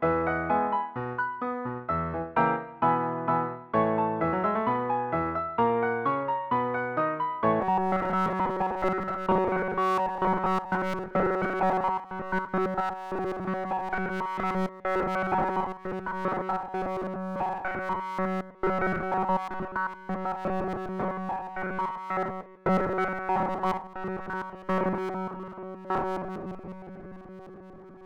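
From 7.61 s to the end, the audio takes on a robotic sound from repeated short buffers, a rigid metallic buzz locked at 188 Hz. The likely cause is new audio arriving too rarely, so the player loops a fragment of about 5.3 ms and skips the real signal, with essentially all of it replaced. Unlike comb filtering or flanging, the pitch stays fixed and never sweeps, and only the rough contour of the original sound survives.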